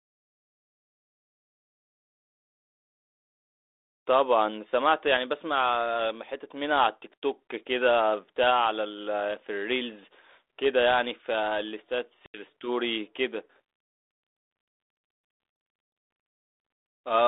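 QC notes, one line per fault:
12.26–12.41 s, packet loss on an ADPCM call: about 80 ms of lost packets leaves a hard-edged silent hole. Unlike a plain dropout, the decoder's predictor and step size then disagree with the sender's, so speech resumes slightly distorted, settling within tens of milliseconds.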